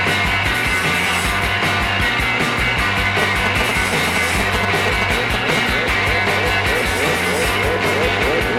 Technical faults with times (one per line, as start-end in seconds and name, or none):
3.22-5.59 GSM signalling bursts